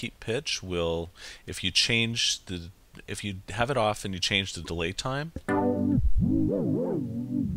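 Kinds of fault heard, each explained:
Damaged data in a compressed stream: corrupted bytes make the decoder misread or drop frames and hunt for the next frame header, giving a 56 ms disruption from 4.61 s, seen as a narrow vertical break in the spectrogram and an abrupt, out-of-place waveform stretch.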